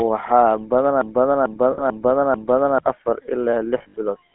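Speech runs through a GSM full-rate codec for its whole length, with the band held to roughly 200 Hz to 3.4 kHz and a plainly audible buzzy, gravelly roughness, consistent with the 13 kbps GSM coder rather than simple band-limiting, which would sound muffled but smooth. From 1.01 to 2.78 s a broken-record loop repeats a 0.44 s fragment four times back to back, and the speech that belonged there is gone. It is exact repetition, not a fading ring, so the likely cause is a stalled player or stream resending its last buffer. Lost GSM frames appear at 1.72 to 1.84 s, a 60 ms gap that fits about three 20 ms frames, and at 3.78 to 3.95 s, where 120 ms of loss is scattered over 160 ms with the longest run about 70 ms. Each gap is filled by a rough, metallic held tone rather than repeating, which is what separates it from the loop.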